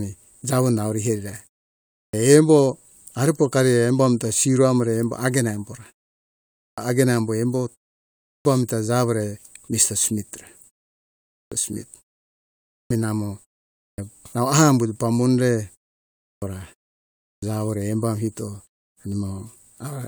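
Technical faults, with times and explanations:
1.91, 6.55, 8.22, 11.3, 12.69, 13.79, 16.19 and 17.21 s: clipped start after a pause. After each gap of 0.42 to 0.75 s, the output path has gone idle and needs 190 to 230 ms to wake, so speech bursts in abruptly with its opening sounds swallowed.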